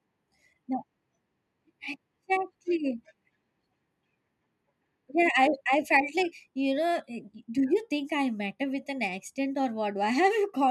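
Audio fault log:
Nothing to log here: I listened through the whole speech recording and didn't catch a single fault.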